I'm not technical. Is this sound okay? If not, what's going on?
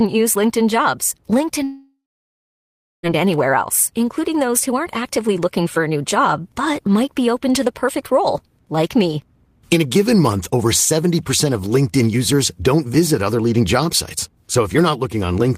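No. A long network dropout likely cut the audio from 1.63 to 3.06 s: a brief fading buzz, then silence, until "anywhere else including those".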